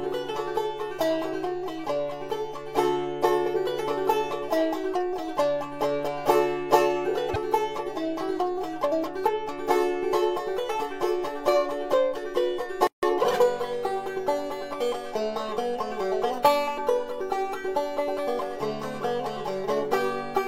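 At 12.87 s a gap at a join of encoded pieces opens. Two separately encoded sections were butted together untrimmed. Encoder start delay and end padding leave a 157 ms gap. Its edges sound smeared. The sound resumes at 13.03 s exactly where it stopped.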